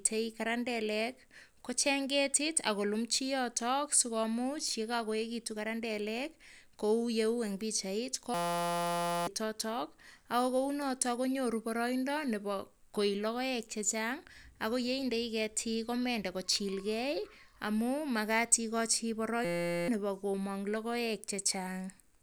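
At 8.34 s, right after "eng pichait", the speech gives way to a system hang loop that lasts until 9.27 s, and the same fault returns from 19.45 to 19.88 s. Each time the machine stalled while the sound hardware kept replaying one 5.8 ms slice of its ring buffer, which fits a 256-sample buffer. That tiny loop repeats at 172 Hz and comes across as a steady, hard-edged buzz. A hum or interference tone would sit under the speech, but this buzz replaces it entirely: about a second of audio is lost in the first hang and about 0.4 s in the second. A longer buffer would have produced an audible stutter of repeated fragments instead of a pitched drone.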